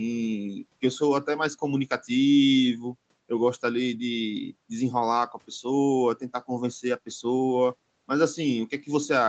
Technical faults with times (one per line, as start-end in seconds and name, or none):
none